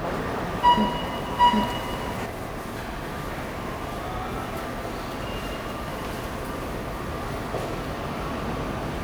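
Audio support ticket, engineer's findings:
Doubled audio track, 0 to 2.26 s, already present at clip start. Full-band second copy trails the original by roughly 0.7 s at about equal level. No decay or room colour on the copy, so not reverb. Copy cuts off abruptly at 2.26 s. Likely cause: a second, slower capture path or an edit holding two out-of-step copies of the same audio.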